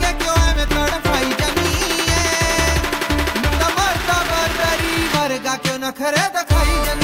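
Running through the whole clip is a regular ticking that merges into a 25 Hz buzz, the sign of a filter restarted on every block. The filter loses its memory at each block boundary and starts again from silence, so every block opens with a small transient. Twenty-five restarts per second points to blocks of about 40 ms. Mains hum stays constant regardless of the material, but this buzz rises and falls with the level of the audio.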